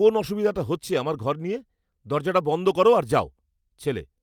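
Nothing in this speech recording jumps out as a technical fault; the sound just carries on without any glitches, dropouts or odd noises to flag.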